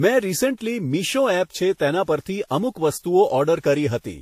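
Throughout, the speech was likely run through transcoding between lossy codecs, roughly Vorbis then WMA, so two sets of swirly artefacts overlap and nothing remains above 15.4 kHz.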